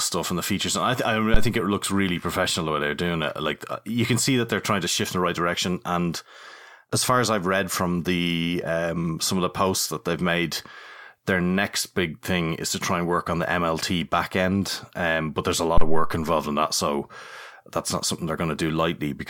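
At 1.34 s a phantom power thump hits the speech just before "it looks really professional": a deep low-frequency thump peaking at about -5 dBFS and dying away within 43 ms, ending by 1.54 s. A second thump at 15.78 to 16.21 s, between "but there's a" and "in that so", peaks at about -5 dBFS with a longer 98 ms decay. Each is a supply being switched on a live input, its voltage step passing through the coupling capacitors.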